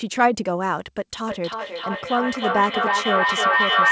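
A feedback echo between two devices sets in at 1.27 s and runs to the end of this speech clip: one device replays the other's microphone, which picks it up again. Speech returns roughly every third of a second, thinning and ringing, building to about 5 dB above the speech. The band stops at 8 kHz, as a G.722 call path at 64 kbps would give.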